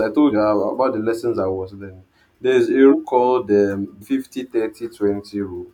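Speech with compressed frames skipped at 0.30, 2.90 and 4.01 s. The decoder drops whole 42.7 ms frames, so the audio jumps ahead about 150, 300 and 150 ms. A spectrogram shows sudden content discontinuities.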